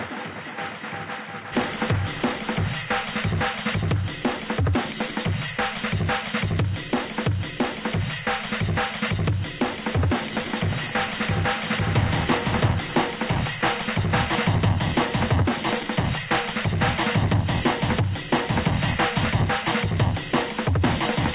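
A recording of everyday sounds with nothing technically wrong, carried over a call path whose band stops at 4 kHz, which fits G.711 A-law at 64 kbps.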